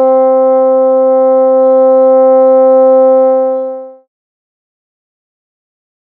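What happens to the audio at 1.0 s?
Nothing goes wrong at 1.0 s; the sound continues intact through that moment with no dropout, click or change in level.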